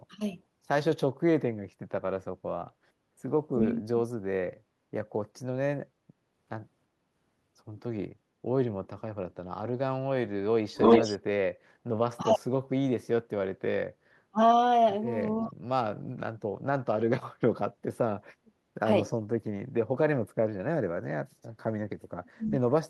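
From 3.56 to 3.96 s the speech sinks by around 35 dB, most likely speech suppressed in double talk: with both sides talking, the echo canceller could not tell this talker from loudspeaker echo and attenuated everything. On a waveform the envelope collapses to a thin sliver; on a spectrogram the harmonics and upper bands fade to near-blank for those 0.4 s before returning.

At 10.74 to 11.18 s an echo leak appears: a copy of the speech arriving 347 ms late, about as loud as the direct talker or slightly louder. Residual loudspeaker sound at the far end was probably not fully cancelled and was sent back. A spectrogram shows a second, time-shifted set of harmonic striations overlapping the first. The waveform shows a repeated envelope shape a third of a second behind, and the result sounds doubled and smeared.

Further double-talk suppression drops hit at 12.17–12.47 s (around 35 dB), 14.31–14.40 s (around 30 dB) and 15.36–15.55 s (around 25 dB). 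Each shows as a notch in the waveform envelope and a vertical gap across the spectrogram.

Inside that last dip, at 15.42–15.46 s, a second echo leak surfaces. It is a faint 40 ms scrap about 30 dB under the speech, delayed by the same 347 ms. It shows as a barely visible smudge of energy inside the suppressed gap.

The deepest suppression comes at 22.02–22.52 s, dropping around 40 dB for half a second. The waveform is almost flat there, and the spectrogram goes dark above the noise floor. Throughout, the spectrogram's energy stops near 12 kHz, consistent with the Opus call path's band limit.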